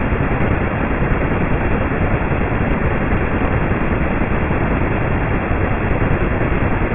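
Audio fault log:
No technical faults are audible in this speech recording, and the signal stays steady and intact throughout.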